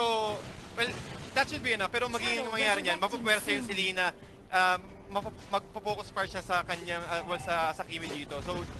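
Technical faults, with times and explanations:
No technical faults can be heard anywhere here.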